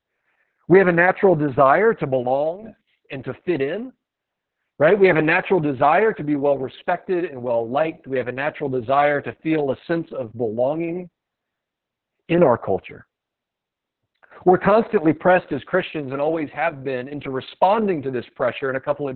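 Speech carries Opus voice compression throughout: nothing survives above 4.4 kHz, and the voice sounds hoarse and faintly robotic, which points to heavily squeezed narrowband SILK coding at around 6 kbps. Unlike a plain low-pass filter, the coarse excitation roughens the voice itself, not just its brightness.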